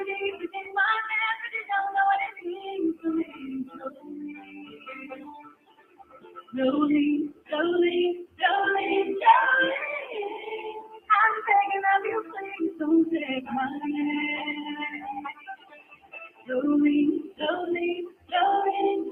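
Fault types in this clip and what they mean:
noise suppressor applied to music or sounds: A noise suppressor built for dialogue was left running on this material and keeps mistaking its steady content, ambience and reverb for background noise. Its gain moves over a range of roughly 15 dB as it reclassifies the signal, so onsets come through while sustained parts and tails are pulled down. The result is a pumping, fluttering sound that thins out whenever anything is held.
sound cut by the noise suppressor: At certain moments the suppressor judged the sound itself to be noise and attenuated it harder than its surroundings. The deepest drops are about 14 dB at 0.32 to 0.76 s, about 19 dB across 2.33 to 8.42 s, about 18 dB at 10.36 to 11.09 s, about 8 dB at 12.23 to 12.8 s, and about 18 dB over 14.96 to 18.33 s. Sustained and decaying parts sink, while sharp attacks survive.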